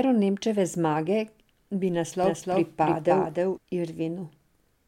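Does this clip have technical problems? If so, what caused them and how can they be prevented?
Yes. From 2.24 to 3.58 s, an equally loud full-band copy of the speech trails about 300 ms behind, starting and stopping abruptly. This doubled audio track is likely from a second, slower capture path. A spectrogram shows every pattern repeated as a shifted twin. Feed only one capture path into the mix.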